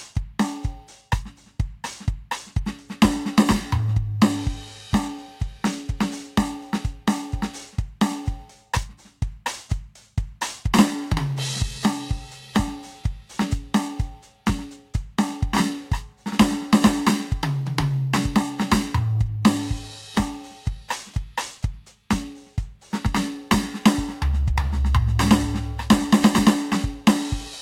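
Music, with no technical faults to be heard.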